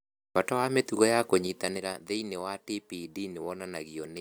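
Zipper noise, 1.39–1.95 s: unsmoothed 3 dB steps lower the level about 10 dB, each ticking. The waveform envelope shows stairs, and the spectrogram shows thin vertical lines.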